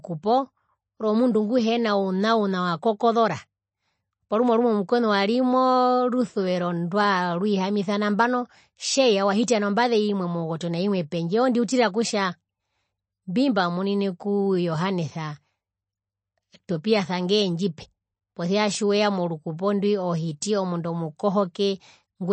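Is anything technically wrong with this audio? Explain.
Yes. Throughout the speech the sound is watery and swirly, with chirpy, metallic edges on s sounds, smeared onsets, and nothing above 8.3 kHz. This is likely MP3 compression at a starved rate, consistent with a bitrate around 31 kbps. Short of bits, the encoder cuts the treble at a fixed frequency and zeroes weaker frequency lines, which flicker on and off between frames. That flicker produces the swirling and chirps, and the damage is plainly audible.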